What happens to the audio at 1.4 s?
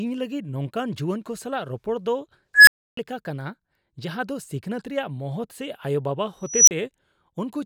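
Nothing goes wrong at 1.4 s: the speech carries on cleanly through that moment, with no dropout, click or distortion to be heard.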